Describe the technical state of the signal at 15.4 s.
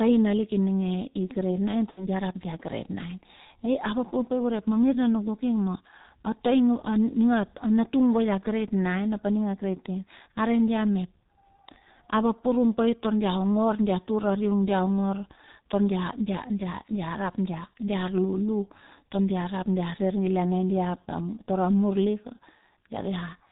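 At 15.4 s the speech passes through a G.723.1 codec across the whole clip, coding 30 ms frames at 6.3 kbit/s with nothing above 4 kHz, leaving it heavily muffled and hoarse with smeared consonants.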